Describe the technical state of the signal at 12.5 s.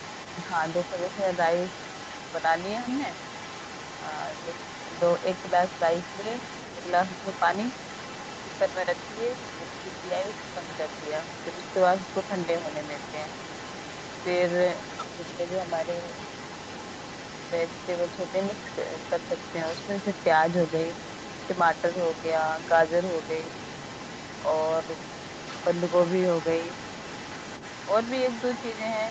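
At 12.5 s a second voice runs faintly underneath the main talker, roughly 15 dB lower. This is the other side's voice leaking through, present from the start of the clip until 14.27 s. It is likely residual echo: the far end played through the talker's loudspeaker, picked up by the microphone and not fully removed by the echo canceller. Unlike room reverberation, which is a smeared delayed copy of the talker, this is a different voice. Both voices sit within the Opus call path's 8 kHz bandwidth.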